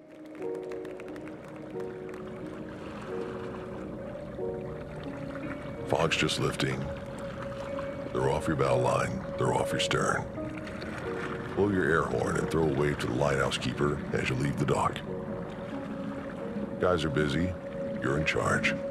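No technical faults can be heard anywhere in this clip.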